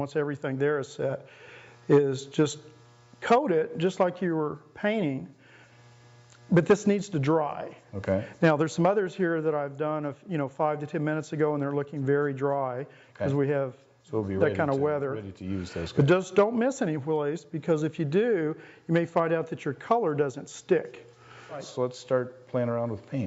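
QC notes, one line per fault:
No faults found.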